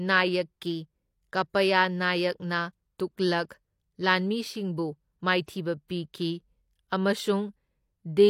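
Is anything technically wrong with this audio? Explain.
Yes. There is pre-echo at 3.49 s, from 5.46 to 5.48 s, and at 5.88 s. The transform codec spread its quantisation noise across whole blocks, so noise meant for sharp speech onsets leaked into the quiet before them, adding 15 to 22 ms of hiss and smearing the attacks.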